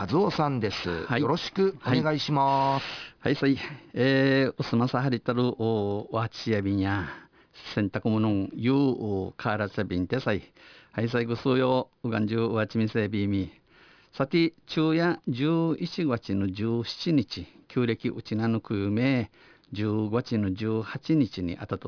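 Aliasing runs through the whole speech clip. The sound fits a drop from 44.1 kHz to about 11 kHz without filtering first, so energy above 5.5 kHz folds back down, around 20 dB below the speech. Sibilants turn gritty and metallic rather than simply dull, as plain low-passing would leave them.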